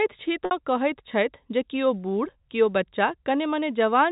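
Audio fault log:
0.45–0.51 s, packet loss with pitch repetition: about 60 ms went missing, which fits two lost 30 ms packets. The receiver bridged the gap by looping the last pitch period, so there's a short held, buzzy tone before the speech carries on.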